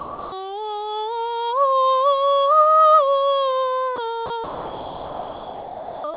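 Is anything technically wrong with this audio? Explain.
Yes. The music drops out five times: 0.00 to 0.32 s, 3.96 to 3.98 s, 4.26 to 4.30 s, 4.44 to 6.04 s, and 6.14 s to the end. Each gap is filled with steady noise or near silence. This is likely sound dropped by the voice detector, which mistook the music for background and stopped sending, so comfort noise was played in its place. The narrow call path, with nothing above 4 kHz, fits G.711 mu-law.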